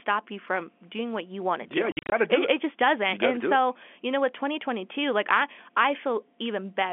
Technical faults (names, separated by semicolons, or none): packet loss filled with silence